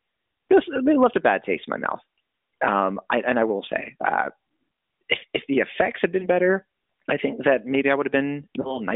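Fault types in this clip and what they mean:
lost AMR speech frames: Radio errors corrupted speech frames, so the decoder filled each gap by repeating its last good pitch and vocal tract settings at reduced gain. This happens twice, near 6.20 s and near 8.62 s. Each sounds like a brief dip or warble, pointing to a single lost 20 ms frame, with short recovery afterwards. The narrowband AMR band, roughly 250 Hz to 3.6 kHz, stays in place through both.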